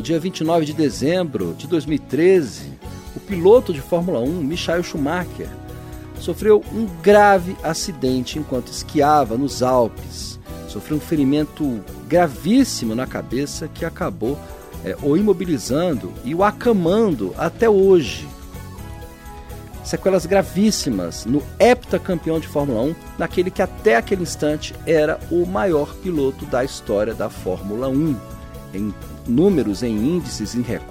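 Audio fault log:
No faults were heard anywhere in this clip.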